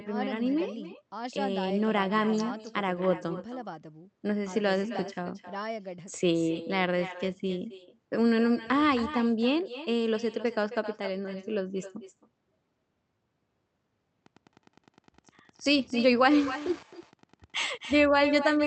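From the start, the speech carries an echo with no canceller. The far end's loudspeaker feeds its microphone, and nothing subtracts it. Each phrase returns roughly a third of a second later. The copy sits about 14 dB down, and thinner.

From 14.23 s to the end, Wi-Fi interference appears. A nearby radio's bursts are rectified by the audio circuit. Its beacon repeats every 102.4 ms, so it is a steady tick about ten times a second. It sits far below the speech.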